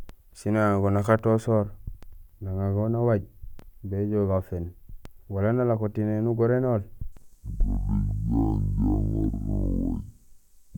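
Speech clip with stereo read as mono from 7.12 s to the end at 10.77 s: interleaved left and right samples are treated as one channel, so playback drops to half speed, pitch falls 12 semitones, and a fainter mirrored copy of the spectrum appears in the upper half.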